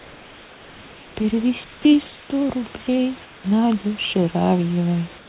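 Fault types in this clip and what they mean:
Comfort noise in place of the background: only the pauses change, turning into flat, featureless hiss about 1 to 4 dB below the room noise, likely from discontinuous transmission.
Sound dropped by the voice detector: unlike those pauses, here about 20 ms of real sound vanishes into the same hiss, likely because the detector mistook it for background.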